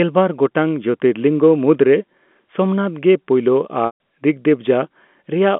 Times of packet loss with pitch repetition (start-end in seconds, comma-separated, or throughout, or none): 3.86-3.98